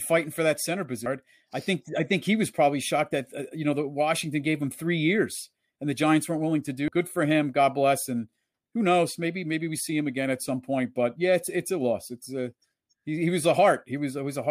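At 6.88 s there is a CD skip: the laser lost its track and landed on another turn of the disc's spiral. The player mutes for a few milliseconds, heard as a brief tick, and the speech resumes from a different point. Unlike a plain dropout or an isolated digital click, the tick is followed by a break in continuity, because the audio picks up from elsewhere on the disc instead of carrying on from where it stopped.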